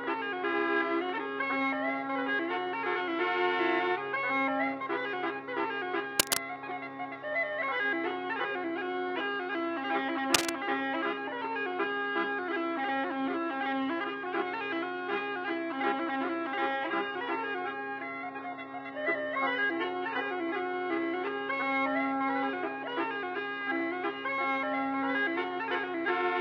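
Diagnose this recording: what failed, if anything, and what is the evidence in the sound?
In the analogue wiring, a worn cable, connector or control was likely being disturbed, producing cable scratch noise. Dense, irregular bursts of crackle sit over the sound from 6.19 to 6.52 s, at roughly the same level as the programme, and again from 10.34 to 10.53 s, louder this time at about 5 dB above it. Each burst is the fluctuating contact resistance of a bad junction modulating the signal while it moves.

At the network and codec stage, the adaptive stream dropped to a lower bitrate between 16.74 and 20.74 s. The switch is abrupt with no gap: codec artefacts rise, then full quality returns just as suddenly. That character points to a fall from a mid-rate AAC encoding to a very low-rate HE-AAC version around 12 kbit/s, where the high band is regenerated rather than coded.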